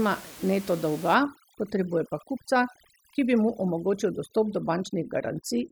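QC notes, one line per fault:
1.14 s to end, overdone noise removal: right after "neto dolga", the background drops and breaks up into twinkling specks, because bands near the noise estimate are pushed down hard, taking quiet speech detail along with room noise about 20 dB below.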